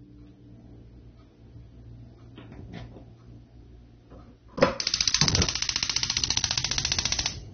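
Heavy lossy encoding, likely AAC compression at a low bitrate, runs through the whole clip; the damage is plainly audible, which fits AAC-LC at around 24 kbps. With so few bits per frame, the encoder discards the top of the spectrum, and nothing is present above 6.4 kHz, so the sound is dull and muffled. Coarse quantisation of the remaining bands also leaves a smeared, warbling texture on sustained sounds.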